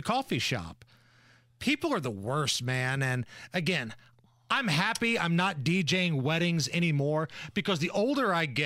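No technical faults can be heard anywhere in the recording; the signal holds steady and continuous from its first moment to its last.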